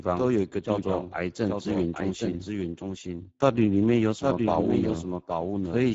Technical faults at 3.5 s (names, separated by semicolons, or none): doubled audio track; Speex codec